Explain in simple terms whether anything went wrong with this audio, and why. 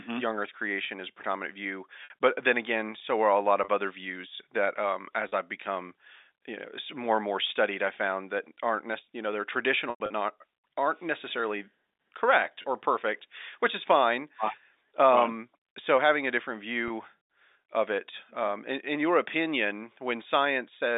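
Something did go wrong: packet loss with pitch repetition. Bits of the audio went missing on the way. To hide each gap, the receiver replayed the last small cycle of the sound and faded it out. Short gaps sound like a brief buzzy hold. Gaps come at 2.04 to 2.10 s (between "is a predominant view" and "but then again so"), 3.64 to 3.68 s (after "so are a lot"), 5.28 to 5.32 s, 9.9 to 10.1 s, 12.62 to 12.64 s (after "not aren't necessarily correct"), and 16.88 to 16.90 s. The worst is near 10 s, where losses are scattered over 200 ms and the longest lasts 100 ms. There the sound may fade toward silence before returning. The narrow telephone sound is normal for a phone line.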